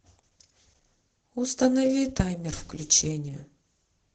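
Speech with heavy Opus voice compression throughout: SILK-mode coding cuts everything above 8 kHz, and coarse excitation sounds hoarse and slightly robotic, fitting roughly 10 kbps; spectrograms show a flat ceiling and smeared harmonics.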